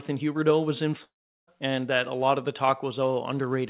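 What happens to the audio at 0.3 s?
Nothing goes wrong at 0.3 s: the speech there is intact, carried by the narrowband call path, whose sound, with no content above 4 kHz, fits a G.711 A-law codec.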